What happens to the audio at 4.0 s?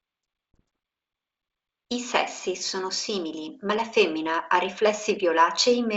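Nothing goes wrong at 4.0 s: the speech carries on intact through that moment, with only the faint upper-band hiss of G.722 wideband coding at 64 kbit/s.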